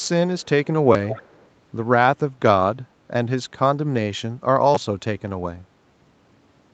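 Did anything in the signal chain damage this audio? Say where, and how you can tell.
Yes. Faint, delayed copies of the speech trail the direct sound at 0.00 to 0.09 s, 0.39 to 0.46 s and 1.07 to 1.46 s, each lagging by about 251 ms. The first two sit roughly 35 to 40 dB down, and the third is much stronger, around 15 dB below the speech. This is an echo leak, likely from the far end's echo canceller not fully removing loudspeaker pickup. On a spectrogram, a dimmer duplicate of the harmonic pattern appears shifted a quarter second to the right.

The second fault is a repeated buffer in the driver or playback buffer stage, at 0.93 to 0.95 s and again at 4.75 to 4.77 s. Each time, a 10.67 ms slice plays two extra times with hard joins, which fits a 256-sample buffer. About 20 ms of real audio is lost. It is heard as a brief buzzy stutter. In the waveform, identical short cycles repeat back to back, and the spectrogram shows thin vertical lines at the splice points.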